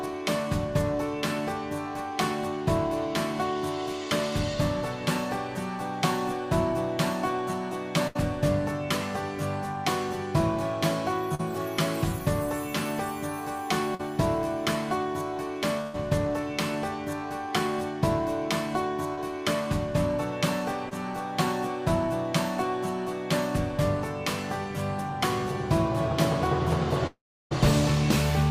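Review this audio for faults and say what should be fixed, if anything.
A burst of packet loss occurs at 8.07 to 8.17 s and again at 15.81 to 15.96 s. The receiver extended the last sound for about 74 ms and then 126 ms, fading it as a buzz or hiss. About 80 ms and 120 ms of audio are gone.

Short concealed packet loss appears at 11.35 to 11.41 s, 13.95 to 14.01 s, 19.15 to 19.19 s and 20.89 to 20.93 s. Each hole of 20 to 40 ms was filled by continuing the previous sound and blending back. The result is a brief smear or wobble.

At 27.07 to 27.53 s the sound breaks off for about 440 ms. A fading continuation gives way to about 340 ms of silence, and the audio resumes further on. This is likely a long network dropout.

A larger, adaptive jitter buffer with forward error correction on a more stable network path would prevent these gaps.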